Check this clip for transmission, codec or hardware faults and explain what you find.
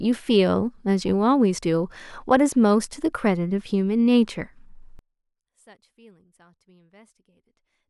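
There's one fault, and it takes over the last stretch of the speech. From 4.99 s to the end the level suddenly drops by about 32 dB, leaving only a faint trace of the voice. That's the classic signature of one channel inverted: with one stereo side's polarity flipped, the centred speech cancels when the two are summed to mono. That's the likely cause, leaving only the small difference between channels.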